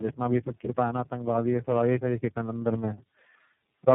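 Tandem speech coding runs through the whole clip. The speech sounds like it passed through three speech codecs in a row, decoded and coded again at each link. Each coder had to work on the damaged output of the one before. The result is rough, muffled and warbly speech. Nothing is heard above 3.9 kHz. The final stage sounds like iLBC, which fits a narrowband mobile and VoIP path.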